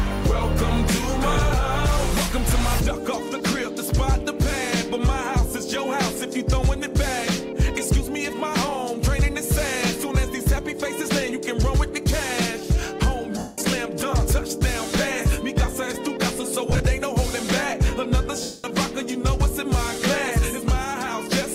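At 13.38 s, lost LE Audio frames cut out about 200 ms of sound. The LC3 decoder repeats the last spectrum with random signs and fades it, so tones smear into noise and then sink toward silence. At 16.70 s, brief dropouts scatter across 100 ms, with the longest gap around 40 ms. At 18.43 s, a 210 ms loss fades out the same way. The light codec compression beneath is faint.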